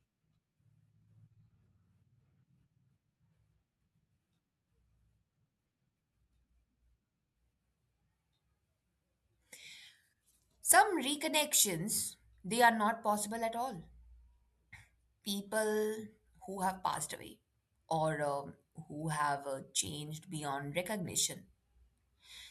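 No technical fault can be heard anywhere in this speech recording.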